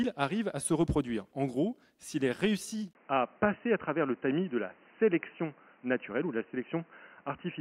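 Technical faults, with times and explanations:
2.93 s to the end, input switched to a poorer device: after a brief gap of about 20 ms, the sound goes dull and boxy, with nothing left above 3 kHz, and a new background noise appears about 30 dB under the signal, while loudness stays roughly the same. That's most likely the system jumping to a different input, such as a headset's call profile, with its narrower band and its own noise floor.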